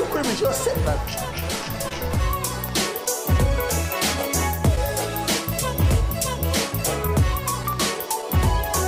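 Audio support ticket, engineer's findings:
Clock drift between sender and receiver: sender clock running slow, about 2% behind the receiver, across the whole clip. The jitter buffer keeps draining, so playback timing wobbles slightly throughout, with small uneven hiccups rather than one obvious break.

Repeated timing corrections, 0.43 to 7.96 s: the receiver stretches playback to compensate for the slow sender, running at 99% speed and inserting around 50 ms in total. The edits are small and irregularly spaced, heard as a faintly unsteady tempo.

Scattered short gaps, 0.70 to 1.92 s and 7.07 to 8.24 s: a few packets late or lost in each stretch, each hole very short (the longest only a couple of hundredths of a second) and patched by extending the preceding sound. The result is brief ticks or smears in otherwise continuous sound.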